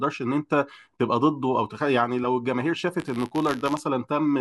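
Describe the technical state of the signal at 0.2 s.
At 0.2 s the signal is intact, with no dropout, clipping, noise burst or other fault audible at that point in the speech.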